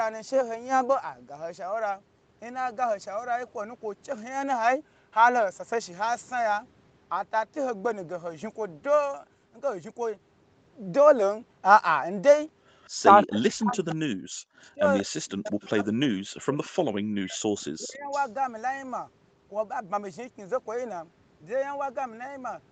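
At 12.79 to 12.90 s a faint delayed copy of the speech appears, very far below the talker. This is an echo leak. It trails the original by 183 ms. The likely cause is a far end on loudspeaker whose echo canceller let some of its microphone pickup back into the call. From 13.1 to 14.39 s the talker's speech drops out in pieces, by as much as about 40 dB, for about a second in all. This is speech suppressed in double talk. Both ends are talking, and the canceller likely cannot tell the talker from the returning echo, so it turns everything down. At 14.61 to 15.06 s the echo returns much louder, about 15 dB under the speech. From 14.75 to 17.40 s the suppression cuts in again, chopping roughly two seconds of speech by up to about 40 dB. More echo follows at 15.45 to 15.86 s, about 25 dB down. A shorter, shallower dip of about 20 dB hits at 17.80 to 18.12 s. A last echo burst runs from 18.11 to 18.31 s, about 20 dB below the speech, with the same 183 ms delay throughout.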